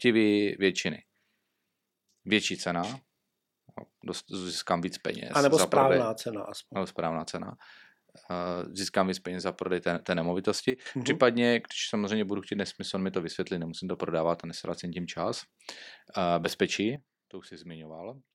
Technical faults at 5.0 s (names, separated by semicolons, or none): none